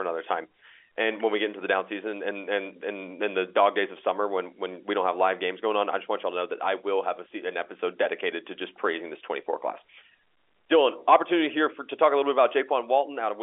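Nothing goes wrong anywhere in this speech clip; it simply has the narrow, boxy sound of an ordinary G.711 telephone line, with nothing above about 3.7 kHz getting through.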